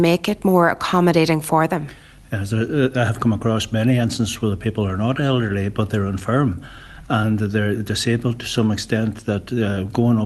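Throughout the clip, small uneven hiccups recur. This is clock drift between sender and receiver: the sender's clock runs about 1% slow, so the receiver's buffer keeps draining. From 0.30 s to 9.55 s, the tempo drags slightly and unsteadily as repeated timing corrections stretch short pieces, playing at 99% speed and adding roughly a tenth of a second in total. All of this comes through an Opus call path whose band tops out at 12 kHz.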